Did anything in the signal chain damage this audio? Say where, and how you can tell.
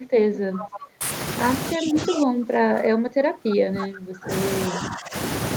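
Yes. The damage is in the call processing. Speech suppressed in double talk appears at 0.0 to 0.11 s, 1.73 to 4.31 s and 4.69 to 5.15 s. The speech dips by about 30 dB, and by about 15 dB in the last stretch. The likely cause is an echo canceller that could not tell this talker from loudspeaker echo and turned both down.

An echo leak runs from 0.34 to 0.91 s. A second copy of the speech trails the original by 332 ms, about 15 dB quieter. That fixed lag points to sound returning through a loudspeaker and microphone. It is likely that the far end's echo canceller left part of that pickup in place.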